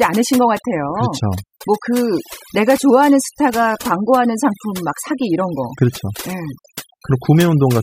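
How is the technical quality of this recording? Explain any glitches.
The main issue is overdone noise removal, and it runs through the whole clip. A noise reduction stage was pushed too hard on noisy speech, so any frequency band sitting close to its idea of the noise gets pulled way down or cut outright, and the softer parts of the voice get caught too. You hear it as a background that drops away and breaks up into twinkly, warbling little specks.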